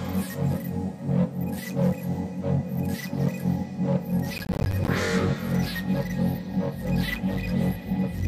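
From 4.38 to 4.88 s there is a burst of processor overload crackle. The processor repeatedly misses its deadlines for short buffers, around 10 ms each, and each miss drops in a hard-edged silent gap. About twenty such gaps produce a gritty tearing that stops when the load passes.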